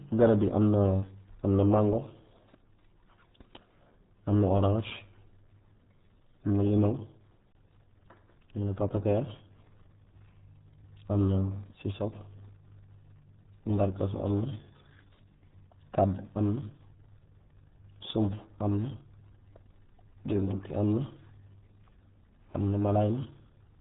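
Throughout, the speech carries RealAudio 14.4 codec damage: heavy, muffled and gargly, fitting an 8 kbit/s stream. A spectrogram shows nothing above a flat 3.8 kHz ceiling, with smeared, blocky energy below.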